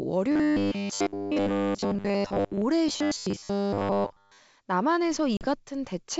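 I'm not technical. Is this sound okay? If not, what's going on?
No. Robotic sound from repeated short buffers runs from 0.32 to 2.62 s and again from 2.88 to 4.39 s. The speech turns into a stiff, metallic buzz at about 100 Hz. The likely cause is new audio arriving too slowly, so the software keeps replaying tiny 10 ms scraps while most of the real audio is skipped.

Packet loss on an ADPCM call comes at 5.37 to 5.46 s. About 40 ms of audio, a few small chunks, went missing and was replaced by a sudden gap of silence. Afterwards the decoder has briefly lost track of the sound, so the speech returns slightly distorted before settling, over the wideband telephone coding (G.722) that carries the call.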